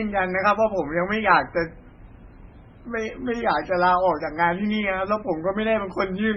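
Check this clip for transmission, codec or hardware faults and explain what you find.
The speech shows one codec fault, present for the whole clip.

Transcoding between lossy codecs runs from start to finish. Nothing is heard above 9.7 kHz, and the artefacts point to a very low-rate MP3 stage, around 16 kbit/s, likely re-encoded afterwards as HE-AAC at roughly 40 kbit/s. The second encoder wastes bits reproducing the first one's damage while adding its own. The result is a band-limited sound carrying the different artefacts from both stages at once.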